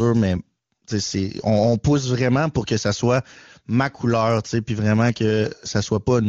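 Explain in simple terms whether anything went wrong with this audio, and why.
Nothing went wrong here.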